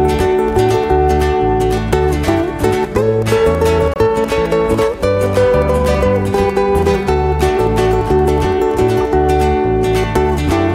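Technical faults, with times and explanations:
3.94 to 3.96 s, block of digital silence: a 23 ms run of samples was zeroed, fitting one unfilled 1024-sample buffer; the sound cuts out and back with no fade, leaving a short hole.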